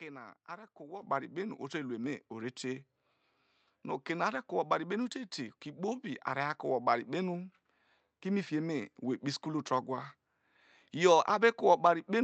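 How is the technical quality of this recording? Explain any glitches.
The recording has two sudden level jumps, both caused by the microphone volume being stepped up. At 1.02 s the level rises by about 10 dB. At 2.04 s, between "kpe na to" and "ore te", it rises again by about 2 dB. Each time, the call software judged the input too quiet and raised the device's input volume in a single step. The speech and the background noise therefore jump together, instantly. A compressor or gain ramp would swell gradually, and a louder talker would leave the background where it was. The call path's high end stops around 8 kHz, which fits a wideband call codec.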